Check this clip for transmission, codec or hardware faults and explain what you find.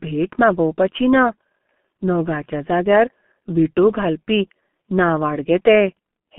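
The speech passes through a G.723.1 codec for its whole length. The codec's long 30 ms frames, at a rate that fits its 6.3 kbit/s mode, plus the 150 Hz to 3.4 kHz phone band, leave the speech muffled and hoarse, with heavily smeared consonants.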